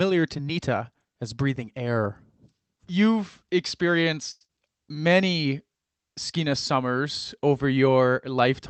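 At 4.31 to 4.44 s there is a short stall from a late packet: the jitter buffer ran dry, so about 92 ms of the last sound is held and stretched before playback resumes with nothing lost.

Right after, at 4.45 to 4.51 s, comes a short concealed packet loss: about 80 ms never arrived and only 39 ms was synthesised from the preceding sound. The result is a brief smear, and the call runs roughly 40 ms tighter.

From 4.95 to 5.15 s a jitter buffer slow-down repeats pitch periods to rebuild reserve, adding 37 ms and playing at 85% speed. The sound is drawn out at unchanged pitch.

Throughout, the Opus call path limits the top end to 8 kHz.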